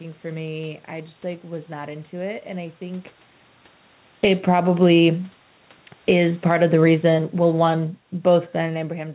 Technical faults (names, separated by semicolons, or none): automatic gain falling; automatic gain rising